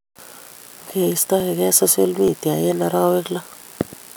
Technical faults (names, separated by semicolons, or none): dropped buffer (overrun)